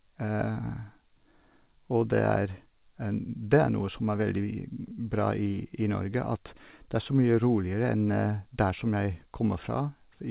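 Nothing's wrong here, just speech that came over a call connection, and the sound stopping at about 4 kHz is simply what you'd expect from a telephone-grade path, which points to something like G.711 mu-law at 64 kbps.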